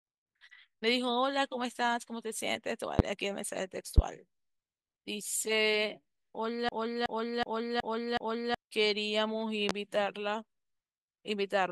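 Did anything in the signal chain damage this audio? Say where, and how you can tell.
Yes. In the analogue wiring, likely a plug, switch or static discharge, a voltage pulse entered the line. It caused sharp loud pops at 2.99, 3.98 and 9.69 s, about 20 to 25 dB above the speech.

At the driver or buffer stage, a system hang loop occurred: the software froze while the hardware replayed one 371.5 ms block, which fits a 16384-sample buffer. This produced a 2.69 Hz stutter repeating five times from 6.69 to 8.55 s, and about two seconds of audio were lost.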